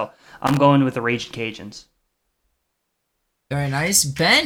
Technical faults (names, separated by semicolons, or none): loose connector crackle